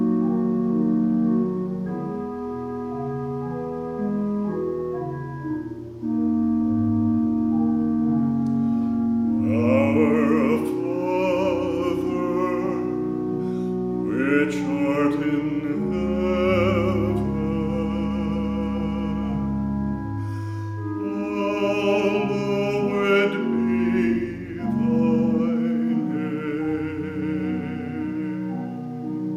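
No technical fault can be heard anywhere in this recording. There is no moment in the audio that needs to be pointed out.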